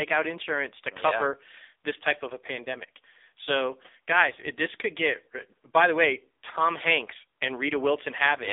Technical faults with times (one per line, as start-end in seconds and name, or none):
0.00-8.53 AMR narrowband mobile codec